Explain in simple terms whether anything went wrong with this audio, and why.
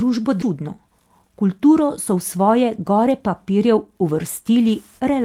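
Two things went wrong near the start of this speech clip.

At about 0.41 s there is a skip ahead. Roughly a second of speech never plays. The audio jumps straight past it with no gap. The two sides are joined almost directly, so part of what was said simply vanishes.

From 0.51 s to 1.43 s there is a jitter buffer speed-up. The receiver had stored more audio than it wanted. To catch up, it cut out many tiny slices, about 70 ms in all. Speech runs about 7% faster at the same pitch and sounds slightly hurried.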